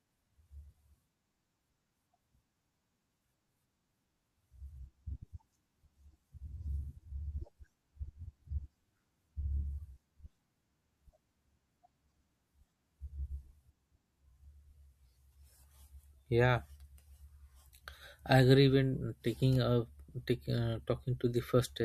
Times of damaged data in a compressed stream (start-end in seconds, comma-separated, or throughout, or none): none